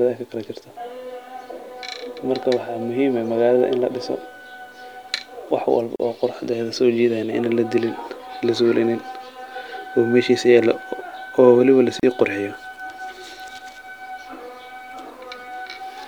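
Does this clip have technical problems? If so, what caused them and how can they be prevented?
Yes. Two gaps at a join of encoded pieces cut the speech, at 5.96 s (37 ms) and 12.00 s (34 ms), six seconds apart. Each piece was encoded separately, so its encoder start delay and padded last frame stay in as silence. A waveform shows a thin flat notch with smeared edges, and a spectrogram shows a blank vertical stripe. To prevent this, trim encoder delay and padding using gapless metadata, or encode the whole recording in one pass.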